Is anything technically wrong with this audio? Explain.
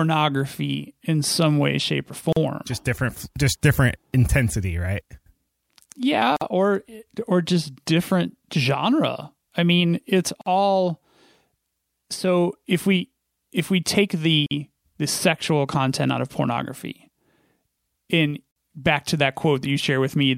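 Yes. The speech drops out abruptly at 2.33, 6.36, 10.41, 14.46 and 18.51 s, every 4 s, for about 40 ms and then 49 ms: gaps at joins of encoded pieces, where untrimmed encoder delay and end padding leave silence.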